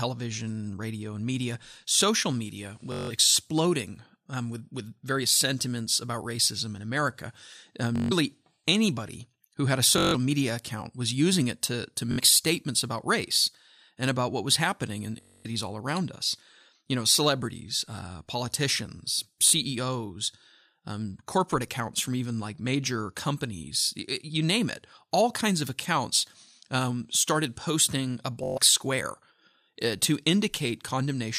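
Bluetooth stutter occurs seven times in the speech: at 2.92–3.11 s just after "and media social media", at 7.96–8.12 s and 9.98–10.15 s, at 12.12–12.20 s between "using it to to" and "statements about race and", at 15.21–15.46 s between "what was happening in" and "all around us", and at 19.48–19.53 s and 28.44–28.58 s. Each time, packets arrived late or not at all, so the receiver kept replaying its last short slice of about 21 ms. The result is a rapid buzzing, machine-gun repeat. The voice then resumes further on, with roughly 40 to 235 ms of speech skipped.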